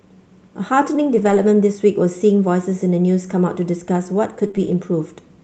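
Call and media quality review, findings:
Lost packet rebuilt from error correction, 1.17–1.47 s, then 4.43–4.45 s and 4.55–4.73 s: rougher, noisier stretches with no gap. The Opus decoder is playing low-bitrate in-band FEC copies carried in the following packets.

Short concealed packet loss, 4.47–4.51 s and 4.51–4.55 s, back to back: a brief smeary wobble. The jitter buffer and decoder are extending the last sound for about 20 ms each, then blending back in. The call path's roughly 8 kHz top end applies throughout.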